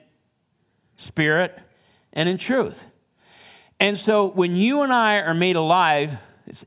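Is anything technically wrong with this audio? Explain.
No, nothing in this speech recording registers as a technical fault.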